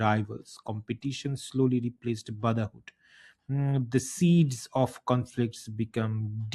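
No technical faults can be heard anywhere in this recording.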